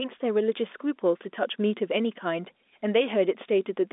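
No technical faults can be heard anywhere in the speech. The telephone line audibly uses G.711 coding, so the sound is held to a narrow band from roughly 250 Hz up to about 3.6 kHz.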